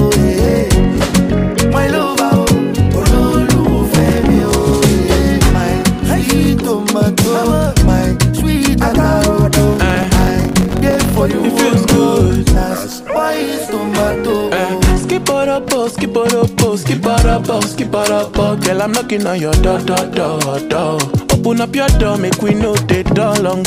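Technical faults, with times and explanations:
3.96–4.23 s: processor overload crackle. A brief gritty burst. Very short buffers, each a millisecond or two, miss their deadlines repeatedly. Each miss drops to silence with hard edges.
9.73–11.18 s: processor overload crackle again, longer and denser. Around a hundred missed buffers tear the sound into continuous crackle until the load eases.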